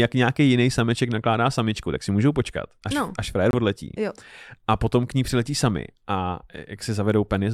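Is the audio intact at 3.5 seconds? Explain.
No. A corrupt frame muted the audio from 3.51 to 3.55 s. The compressed data there was damaged, the decoder rejected it, and the player filled the gap with silence rather than guess at the missing sound. The result is a 38 ms hole, consistent with two consecutive frames being dropped. The speech cuts out abruptly, then resumes on schedule with no shift in timing.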